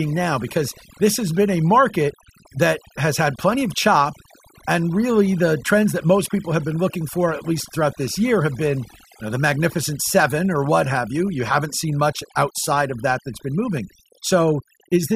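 Right from the start and all the way through, this speech has overdone noise removal. The denoiser was pushed too hard, so any frequency band sitting close to its idea of the noise floor gets pulled way down or shut off entirely, and the softer parts of the voice get caught along with the noise. Between phrases you get near silence sprinkled with little twinkly specks.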